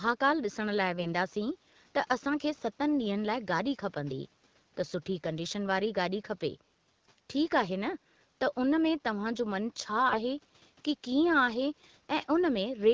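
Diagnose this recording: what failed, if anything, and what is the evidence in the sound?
AMR bit errors on the network link flipped weakly protected frame bits at 1.00–1.08 s and 10.08–10.21 s, turning the speech briefly hoarse, scratchy and gargly.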